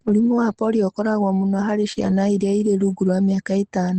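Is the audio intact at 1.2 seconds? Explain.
Yes, the speech is intact at 1.2 seconds, with no fault at that moment.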